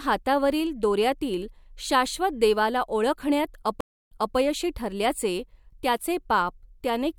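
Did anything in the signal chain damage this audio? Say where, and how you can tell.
Yes. At 3.81 s the speech cuts to silence for 286 ms. When it comes back, it resumes 264 ms earlier than where it stopped, so a short stretch is heard twice, and it comes in muted or fading in. The disturbance is over by 4.36 s. This is a stream reconnect at the network stage. The connection dropped and the player reconnected. The server then resent a burst from slightly behind, and a fresh decoder started mid-stream.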